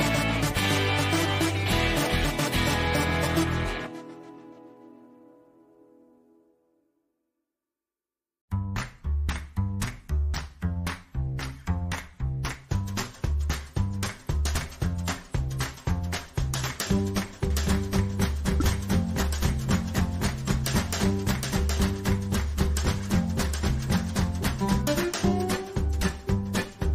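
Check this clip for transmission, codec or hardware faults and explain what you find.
Two faults are present. A doubled audio track runs from 17.50 to 24.82 s: a second full-band copy trails by roughly 0.7 s at about 5 dB lower, likely from a slower parallel capture path, and starts and stops abruptly with no room colour. Compressed frames are skipped at 18.60 to 18.62 s. Roughly 100 ms of missing or rejected frames make the audio jump forward.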